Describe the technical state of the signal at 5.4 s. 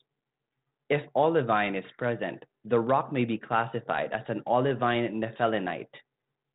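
At 5.4 s the speech is intact, with no fault present, only the steady 32 kbit/s G.726 ADPCM telephone coding that stops short of about 3.9 kHz and leaves a light grain on the signal.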